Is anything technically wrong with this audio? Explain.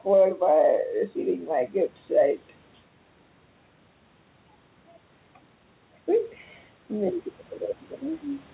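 Yes. Gain pumping runs through the whole clip. The input gain is likely set far too high, so a fast limiter keeps pulling it down on each loud syllable. The gain swings by roughly 5 dB, leaving the speech squashed and flat. The cut-off at 4 kHz is just the narrowband call codec.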